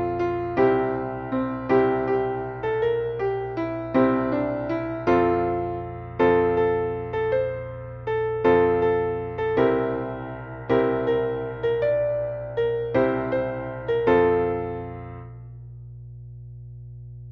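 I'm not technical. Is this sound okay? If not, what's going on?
No. The recording picked up mains hum: electricity from the power supply leaked into the audio, likely through a ground loop or a nearby transformer. That adds a steady, fairly loud low buzz at 60 Hz underneath everything, from start to finish.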